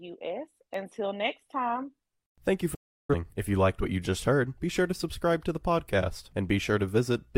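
At 2.74 s the receiver stopped getting usable digital frames and muted, a digital broadcast dropout. The speech fades out over about 8 ms and stays silent until 3.15 s, and the roughly 0.34 s gap suggests several consecutive lost frames.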